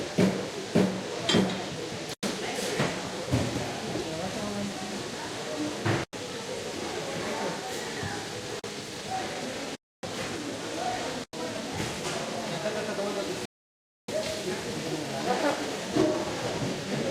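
Blocks of digital silence drop out of the audio at 2.14, 6.04, 8.59, 9.75 and 11.24 s. In each, most likely the output buffer was not filled in time and zeros went out instead. The sound stops dead and restarts with no fade. The three gaps at 2.14, 6.04 and 11.24 s each last 92.9 ms, which fits a 4096-sample buffer, and are heard as short holes. The 8.59 s gap is a briefer 43.5 ms, while the 9.75 s gap stretches to 279 ms and is heard as a longer hole.

A rebuffering stall follows at 13.45 s. The player ran out of downloaded audio and halted until more arrived, so the sound falls silent until 14.08 s and then picks up exactly where it left off. Nothing is skipped, but the pause adds 0.63 s to the running time, and the restart is heard as a resumption rather than a jump forward.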